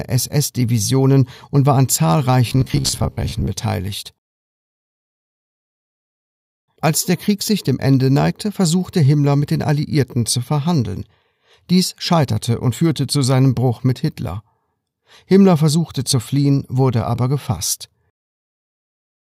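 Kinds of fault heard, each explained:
Robotic sound from repeated short buffers: From about 2.50 to 3.53 s the sound goes rigid and metallic, with a steady buzz near 66.8 Hz riding over it while the rough shape of the sound still comes through. The likely cause is fresh audio arriving too slowly, so playback keeps looping the last chunk, about 15 ms judging by that buzz. Somewhere around two-fifths of the stretch ends up as repeats instead of new material.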